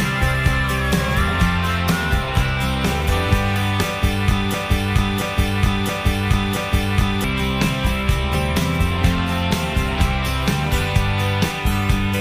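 From 4.54 to 7.24 s the audio sticks in a broken-record loop: one 0.68 s fragment plays four times back to back, identical each pass, and whatever should have followed is lost. The likely cause is a stalled player, encoder or stream resending its last buffered fragment.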